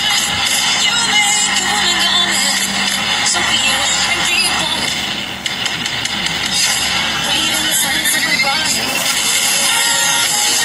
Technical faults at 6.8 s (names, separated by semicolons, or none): none